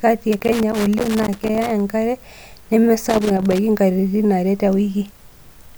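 Loose connector crackle runs from 0.33 to 1.80 s in this speech, then returns from 3.09 to 3.58 s. A worn or dirty contact somewhere in the cable path is shifting and repeatedly losing and regaining its connection, so the signal is chopped into fragments. Each break and remake also jolts any DC on the line, adding pops. Both stretches come through as an uneven, scratchy burst of crackle riding over the speech.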